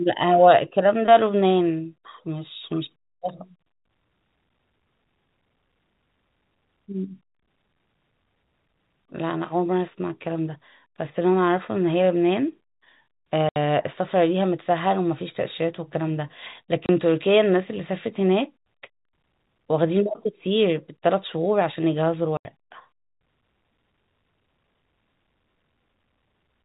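Packet loss filled with silence hits at 13.49 s (70 ms), 16.86 s (30 ms) and 22.37 s (80 ms). Missing packets become hard-edged gaps in the speech, with lengths fitting 10 ms packets.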